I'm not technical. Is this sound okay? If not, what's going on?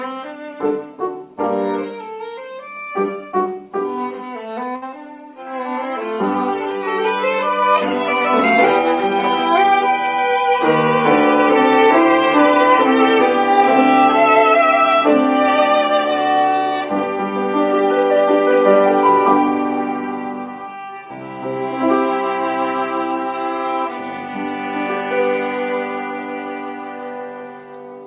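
No. At 4.76 to 4.84 s there is a burst of packet loss. The last sound is stretched and fades for about 60 ms, not dropping to silence, then skips ahead, losing about 60 ms.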